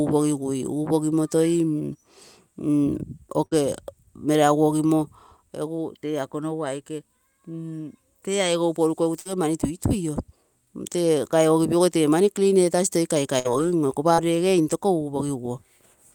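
Speech with three bursts of packet loss, at 3.45 to 3.53 s, 9.19 to 9.27 s and 13.39 to 13.47 s. In each, roughly 60 ms of audio never arrived, so the receiver stretched the last sound into a fading buzz or hiss before jumping ahead. A short concealed packet loss at 14.15 to 14.20 s covers about 40 ms. Unlike the bursts, it is only a brief smear blended back into the audio, with no held tail.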